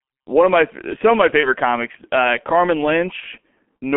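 Throughout, the speech carries heavy G.723.1 codec damage: a narrow line band of about 200 Hz to 3.4 kHz, muffled and hoarse, with smeared consonants. The coarse 30 ms frame updates point to its low rate, around 6.3 kbit/s. That roughness sets it apart from plain band-limiting. From 1.40 to 1.53 s, between "my some of my" and "comics uh", VoIP packet loss concealed by the speech codec covers one lost 30 ms frame. The decoder stretches the last sound into a fading fill, and the speech stays weak or distorted for tens of milliseconds after the gap. A second concealed loss at 3.20 to 3.25 s does the same. Because the gap is filled with that fading, stretched sound, it is not heard as silence.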